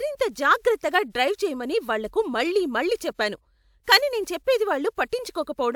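Nothing goes wrong anywhere in this bit of speech, so there's no fault to point to at any moment.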